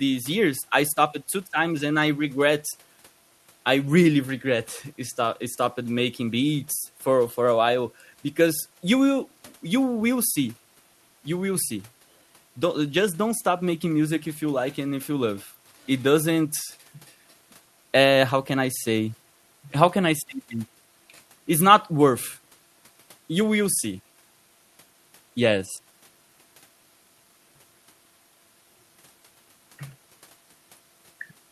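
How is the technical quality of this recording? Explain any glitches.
No glitches turn up anywhere in the recording, and the signal stays technically sound throughout.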